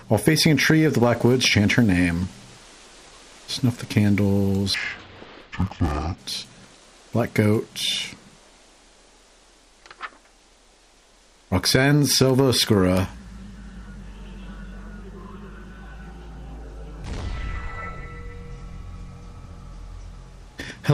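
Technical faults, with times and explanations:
4.74–6.19 s, interleaved audio read as planar: each 10 ms block's alternating samples split into halves, giving a dull, robotic 100 Hz buzz without the octave drop longer blocks would cause.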